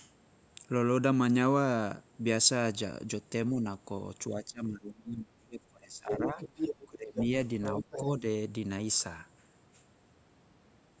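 From 3.53 to 3.64 s the speech dips slightly, a shallow case of speech suppressed in double talk. It is likely caused by the echo canceller turning down the talker while the far end also plays. The main dip runs from 4.3 to 6.4 s, with the voice about 25 dB down for roughly two seconds.

Overlapping its end, from 6.1 to 6.86 s, the other side's voice leaks through at about 5 dB below the speech. This is likely loudspeaker echo the canceller left in the microphone signal, and it is heard as a second voice. Suppression returns from 6.86 to 7.17 s, about 20 dB deep.

More faint leakage follows from 7.17 to 7.25 s and from 7.62 to 8.15 s, about 10 dB under the speech. Within the second stretch there is a brief dropout of about 20 dB at 7.82 s. A small dip at 8.2 s closes the sequence.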